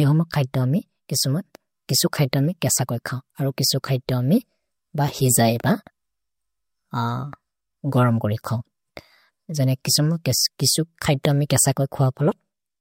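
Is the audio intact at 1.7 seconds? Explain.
Yes, the speech at 1.7 seconds plays through intact, with no dropout, click, distortion or other fault at that moment.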